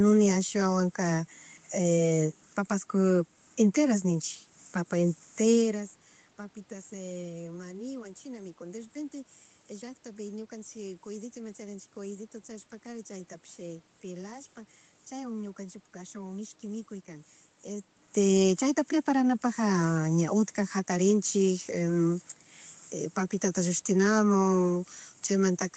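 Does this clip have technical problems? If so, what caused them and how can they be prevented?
No, there are no technical faults; the band-limiting to about 8 kHz and the room noise are expected from the call path and the recording space, and the level shifts around 5.5 s and 17.5 s come from the talker moving relative to the microphone, so nothing needs preventing.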